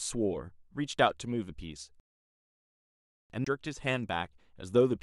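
Speech that falls silent from 2.00 to 3.30 s in a rebuffering stall: playback ran dry of downloaded audio and waited for more data, adding about 1.3 s of silence. The sound then picks up exactly where it broke off, with no content missing. That clean, gapless resumption is what separates it from a dropout or a skip, both of which break the continuity of the audio. The silence is dead rather than noisy, and nothing is repeated.

Just after, from 3.45 to 3.47 s, a CD skip produces a very brief mute, after which the speech continues from a different point. The laser has jumped to another turn of the disc's spiral, so the audio jumps by whole revolutions instead of pausing in place. The flow of speech is discontinuous across the jump.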